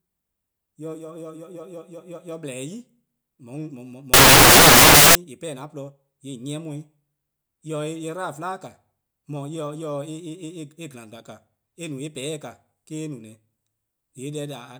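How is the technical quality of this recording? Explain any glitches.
The recording has one clear glitch. From 4.14 to 5.15 s, roughly one second of the speech turns into samples built from the wrong bytes. The decoder is assembling each sample from misaligned or swapped bytes, so the rapidly fluctuating low-order bits end up as the most significant part of every value. The result is a burst of loud, harsh broadband noise over that stretch.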